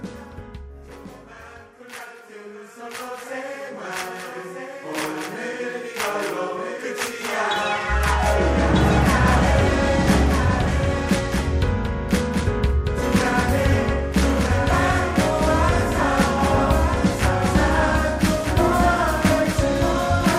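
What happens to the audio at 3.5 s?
A doubled audio track runs through 3.5 s, as it does across the whole clip: a second, full-band copy of the sound trails the original by about one and a half seconds, a few decibels quieter. It has no decay or room colour, so it sounds like a flat, out-of-step repeat rather than an echo. The likely cause is the same audio being captured again through a slower path, or an edit holding two offset copies.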